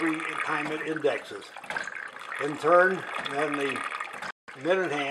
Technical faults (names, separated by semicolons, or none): Bluetooth dropout